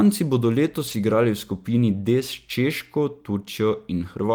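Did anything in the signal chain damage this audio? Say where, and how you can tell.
Yes. There are lost packets rebuilt from error correction at 0.87–0.93 s and 1.95–1.97 s, a network-stage fault. The speech never drops out but turns briefly rougher and noisier there, because the decoder played low-bitrate copies carried by the following packets. The first stretch fits two lost packets, the second one.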